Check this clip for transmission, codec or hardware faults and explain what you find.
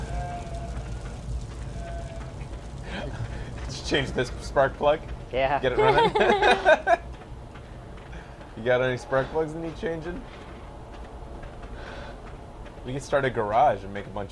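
No faults were found.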